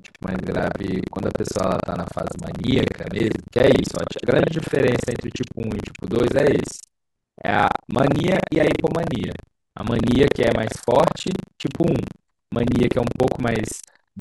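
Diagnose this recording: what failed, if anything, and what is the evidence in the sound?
The failure is at the driver/buffer stage: buffer tearing across the whole speech clip. A robotic 25 Hz rattle rides on the voice and stops in pauses, which fits a buffer cycling every 40 ms. Writer and reader have slipped, so roughly a third of each period replays audio from about 70 ms earlier. On the waveform, hard steps mark both joins every 40 ms. The spectrogram shows regular vertical stripes with smeared, doubled harmonics.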